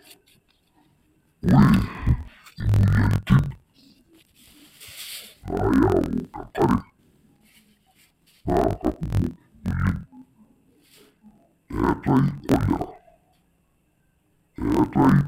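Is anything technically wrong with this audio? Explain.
Yes. Throughout the speech, interleaved audio is read as planar. Each 23.2 ms block, which fits a 1024-sample block, has its alternating left-right samples split into halves, so both play together at half speed. The voice sounds an octave low, doubled and choppy. A spectrogram shows harmonics at half their normal spacing and vertical striping repeating at 43.1 Hz.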